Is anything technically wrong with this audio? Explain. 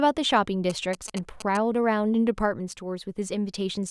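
Yes. From 0.70 to 1.57 s there are GSM signalling bursts: a nearby 2G phone transmits short groups of radio pulses, and the audio circuitry rectifies them into a galloping dit-dit-dit of brief 217 Hz buzzes, roughly 10 dB below the speech.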